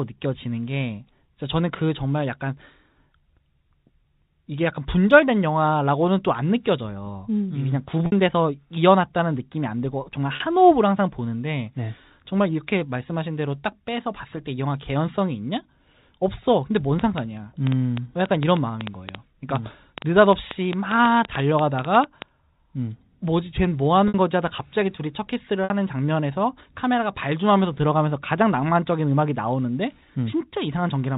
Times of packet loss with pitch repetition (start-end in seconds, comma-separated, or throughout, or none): 8.06-8.12, 10.36-10.40, 24.08-24.14, 25.64-25.70